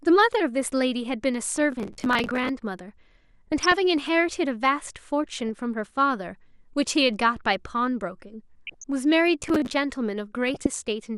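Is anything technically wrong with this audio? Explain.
Yes, the speech carries three kinds of technical fault.

MP2 compression runs throughout: the dull, gurgling, granular quality likely comes from MPEG Layer II coding at a low rate, consistent with around 80 kbps, starving upper sub-bands of bits.

DAB burbling occurs at 1.55 s, 3.52 to 3.72 s, 5.36 to 5.49 s, 8.67 to 8.84 s and 10.48 to 10.66 s: bit errors corrupt sub-band samples and levels, producing short blips of noise and level jumps in single sub-bands.

Processor overload crackle appears from 1.72 to 2.49 s and 9.41 to 9.73 s: many short buffers, around 10 ms each, miss their deadlines and replay old audio, giving gritty tearing crackle.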